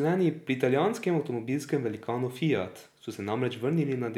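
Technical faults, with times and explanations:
No technical faults heard.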